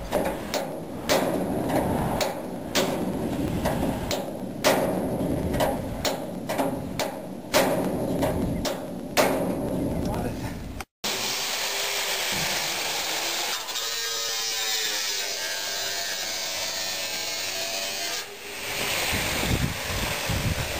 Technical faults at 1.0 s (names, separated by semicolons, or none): periodic USB or driver dropouts